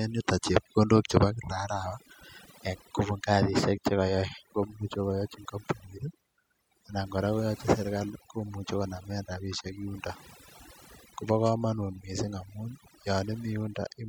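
Speech, and it's been hit with overdone noise removal the whole way through. The denoiser was pushed too hard, so any band near its noise estimate gets clamped down. The gaps go near-silent with twinkly specks, and the voice loses its quieter detail, which got swallowed along with the noise.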